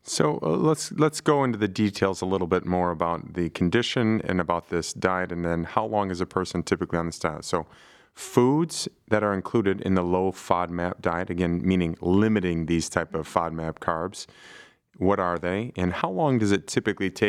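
No technical faults can be heard anywhere in the recording.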